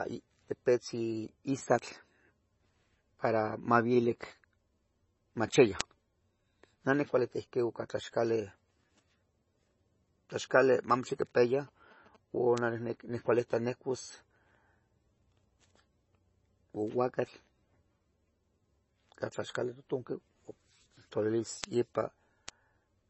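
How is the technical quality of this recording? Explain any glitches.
The recording has clear technical problems: heavy compression damage throughout the speech, five isolated digital ticks, and a burst of radio-interference buzzing near the middle.

Across the whole clip the speech sounds watery and swirly, with s sounds turning metallic and nothing audible above 8 kHz. The likely cause is MP3 compression at a very low bitrate, around 24 kbps. Starved of bits, the encoder cuts the treble and drops weak frequency content that flickers between frames.

At 1.79, 5.81, 12.58, 21.64 and 22.49 s there is a single sharp, broadband tick unrelated to the speech. Each is a bit error spike: a flipped bit in one or two samples makes the waveform jump by a power of two and snap straight back.

From 10.50 to 12.17 s a faint galloping pattern of short buzzes sits well below the speech. These are GSM signalling bursts. 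A nearby 2G phone transmitting short groups of bursts, repeating at 217 Hz, gets rectified by the audio circuitry and heard as that buzz.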